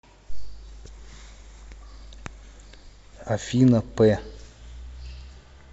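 No technical faults are audible.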